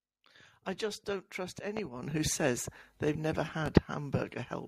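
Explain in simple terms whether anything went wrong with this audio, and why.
Yes: a loud pop cuts in twice, at 1.77 to 1.81 s and 3.66 to 3.70 s, likely from a sudden electrical jolt. The speech carries on underneath rather than dropping out.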